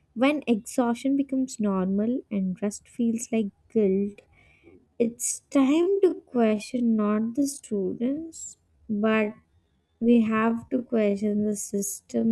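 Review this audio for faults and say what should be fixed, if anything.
Time-stretched section from 3.88 s to 12.32 s, starting right after "and rest feels like". From that point the speech runs at about 0.59 times its original pace, yet the pitch stays where it was, so the delivery suddenly drags. This is likely software stretching the audio to fill a length: it preserves pitch by repeating short slices of the waveform. Fix it by restoring the original pacing, and prevent it by editing to length with cuts instead of stretching speech that far.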